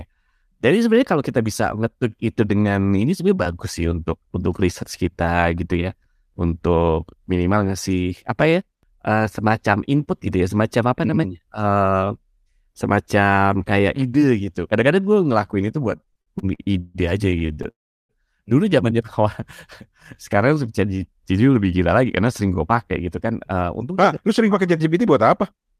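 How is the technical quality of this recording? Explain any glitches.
The recording has three network-related glitches in its second half, all in the speech between about 16 and 25 seconds.

From 15.97 to 17.67 s there are repeated stalls (stutter). Packets reached the receiver late or more slowly than they were being played, so its jitter buffer kept running dry. Each time, the receiver stretched the last bit of sound until more arrived. The result is fourteen brief hold-ups, the longest 148 ms, adding up to about 469 ms and covering roughly 28% of that stretch. Nothing is lost, but the speech drags and stutters.

Right after, from 17.70 to 18.12 s, comes a call audio freeze. The sound holds for a moment and then drops to silence for about 360 ms before the speech resumes where it stopped. In all, roughly 389 ms of filler is inserted, pushing everything after it later by the same amount. 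The likely cause is packets held up in transit, emptying the buffer completely until they arrived.

From 22.41 to 25.05 s there is a jitter buffer speed-up. After the delays, the buffer held more audio than it targets, so the receiver trimmed many tiny pitch-period slices to catch up, removing about a fifth of a second in total. The speech plays at about 108% speed with its pitch unchanged, so it sounds slightly hurried.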